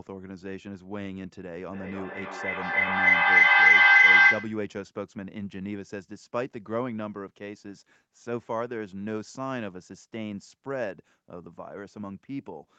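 From 1.72 s to 4.71 s there's a feedback howl: two devices in the same room are on the call, and the loop from one's loudspeaker into the other's microphone adds level each time around. Rather than dying away, the repeats pile up and narrow to a tone near 2 kHz, pulsing roughly every third of a second as it cycles, and peaking about 16 dB above the speech before it cuts out.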